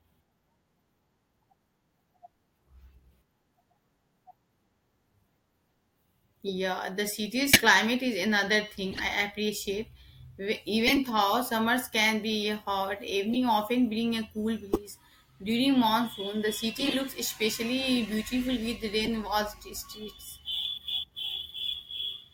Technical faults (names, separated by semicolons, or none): corrupt frame decoded